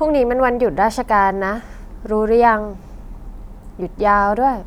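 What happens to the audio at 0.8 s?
Nothing goes wrong at 0.8 s; the speech there is intact, with no dropout, click, distortion or other fault at that point.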